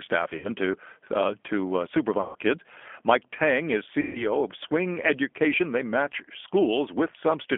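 Throughout, the G.729 codec limits the speech to roughly 250 Hz to 3.4 kHz, at a rate that fits 8 kbit/s. Its pulse-based rebuilding gives a plainly rough, synthetic texture. VoIP packet loss concealed by the speech codec occurs at 0.38 to 0.47 s, just before "to uh to uh" (about 60 ms lost); at 2.21 to 2.37 s, just after "to uh to uh"; and at 4.01 to 4.27 s (about 140 ms each). In each gap the decoder stretches the last sound into a fading buzzy tone or coloured noise, and the speech stays weak briefly afterwards.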